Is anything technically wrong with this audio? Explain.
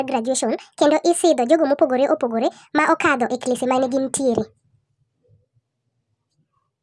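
Yes. Throughout the clip the speech sounds high and hurried, running about 1.5 times too fast with its pitch raised by roughly 7 semitones, so every voice takes on a thin, chipmunk-like quality. This is a wrong sample rate fault: the samples are being played back faster than they were captured, with no rate conversion in between, so speed and pitch rise together by the same ratio. The 1.5 factor fits 16 kHz audio played at 24 kHz.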